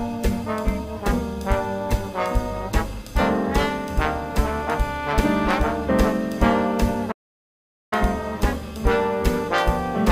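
At 7.11 s the sound cuts out abruptly mid-flow and stays silent for about 0.8 s, resuming at 7.93 s. This is a playback stall, most likely the player running short of data or its thread being blocked, leaving the output empty until it recovered.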